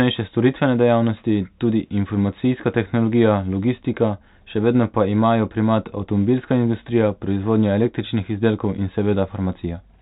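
No technical faults are audible in this speech recording.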